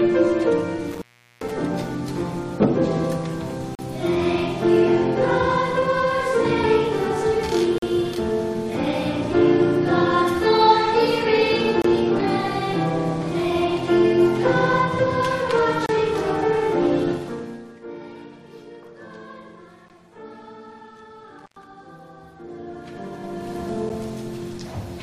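Intermittent contact at 0.91 to 1.52 s: a loose plug or cable opens for about 0.4 s. The sound cuts out with crackle at both edges, and only faint hiss remains until the connection closes again.

Gap between stream segments at 3.75 to 3.79 s, 7.78 to 7.82 s, 11.82 to 11.85 s, 15.86 to 15.89 s, 19.89 s and 23.89 s. These come every 4 s because the time stamps of adjoining 4 s segments leave a small gap at each join. The player fills each one with silence, producing hard-edged holes of about 9 to 41 ms while no audio is lost.

Zipper noise at 17.10 to 17.86 s: a level drop of about 20 dB is applied in 2 dB steps, around twenty times a second, with no smoothing. Each step adds a small click, so a ticking, zipping texture rides on the sound as it falls.

Intermittent contact returns at 21.39 to 21.64 s. This time the connection opens for about 105 ms, giving a shorter, crackle-edged dropout with hiss in the gap.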